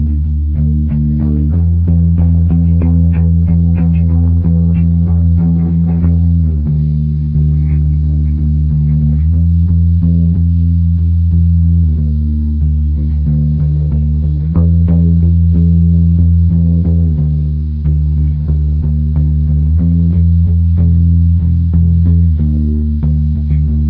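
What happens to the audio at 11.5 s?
Nothing goes wrong at 11.5 s; the audio passes through that moment intact, with no audible fault.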